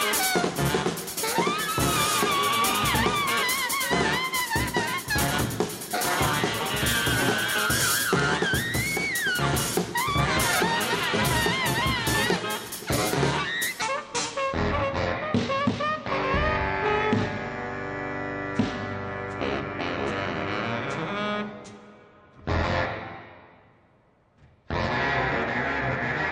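From 13.82 s to the end, a section at the wrong speed: the audio was likely played against a mismatched clock, running at 0.594 times its recorded speed. The sound turns slow and heavy, dropping by about ten semitones, close to an octave lower.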